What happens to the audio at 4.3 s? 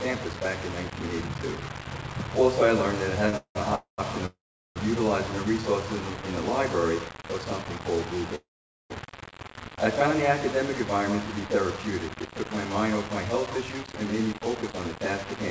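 At 4.26 s the audio stalls until 4.78 s, a call audio freeze. The last sound is stretched into a short fading buzz, followed by about 0.39 s of silence. The audio then resumes exactly where it stopped, now about 0.5 s late, with nothing skipped. The likely cause is packets arriving late so that the jitter buffer ran empty.

Across this moment, as throughout, the sound carries coarse, grainy distortion that moves with the signal, with noise sitting only about 10 dB below it. This is low bit depth without dither, likely around 5-bit rounding with no dither added.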